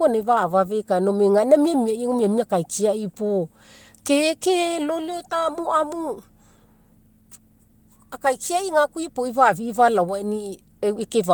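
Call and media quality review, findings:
No faults found in this speech clip. The Opus voice compression path is working normally: hybrid mode at 24 kbps in 20 ms frames, fullband with content reaching about 20.1 kHz, and only light coding damage audible.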